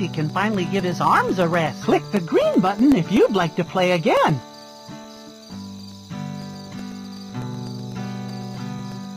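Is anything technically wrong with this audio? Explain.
Yes. Periodic USB or driver dropouts run from 0.17 s to 9.04 s. Something stalls the USB bus or audio driver every 0.125 s, and each time about a millisecond of audio is replaced by silence. You hear a steady tick, eight per second, wherever there's signal.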